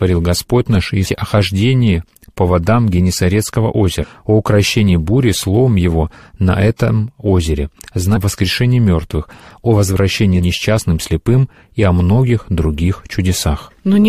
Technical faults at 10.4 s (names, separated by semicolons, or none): damaged data in a compressed stream